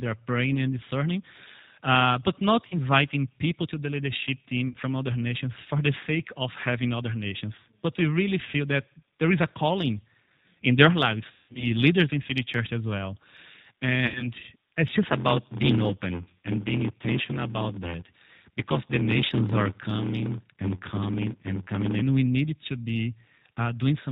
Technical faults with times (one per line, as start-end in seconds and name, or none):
0.00-24.11 G.729 codec
2.68-2.78 VoIP packet loss concealed by the speech codec
4.68-4.75 VoIP packet loss concealed by the speech codec
11.31-11.70 VoIP packet loss concealed by the speech codec
14.06-14.28 VoIP packet loss concealed by the speech codec
15.05-22.02 block size mismatch (padded)